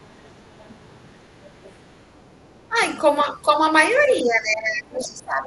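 Other side's voice leaking through appears at 0.61 to 0.74 s and 1.63 to 1.72 s in this speech recording, faint scraps some 30 to 35 dB down, likely loudspeaker echo the canceller missed. Speech suppressed in double talk follows at 2.68 to 2.76 s and from 4.22 s to the end, with the talker's voice dipping by roughly 15 and 20 dB, likely because the canceller turned down both voices while both sides talked at once.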